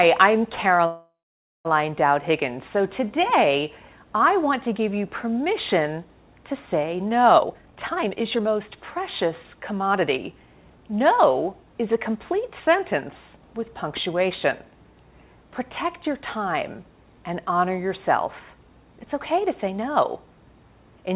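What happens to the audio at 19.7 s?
Nothing goes wrong at 19.7 s: the sound continues intact through the call path, band-limited to nothing above 4 kHz as the G.711 mu-law codec leaves it.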